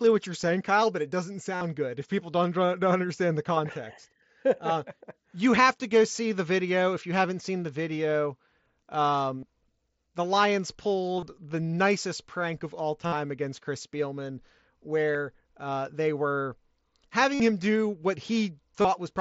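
Speech carried over a Bluetooth headset link (wideband mSBC, top band near 8 kHz) shows concealed Bluetooth headset packet loss at 1.56 s (after "but it doesn't"), 9.40, 11.17, 13.06, 15.13 (before "uh they were"), 17.34 (before "him do what") and 18.81 s. Each lasts about 20 to 60 ms. Missing packets were patched by repeating a recent waveform stretch, which shows as periodic repeated cycles and evenly spaced harmonic bands on a spectrogram, heard as a brief buzz.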